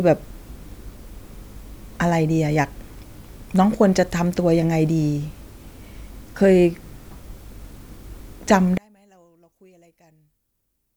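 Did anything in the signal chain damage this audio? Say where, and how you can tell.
Yes. From 8.78 s to the end at 10.96 s, the speech collapses by about 36 dB on mono playback, leaving only a faint residue. That points to one channel inverted, likely a polarity-reversed leg in the analogue wiring, so the shared centre cancels.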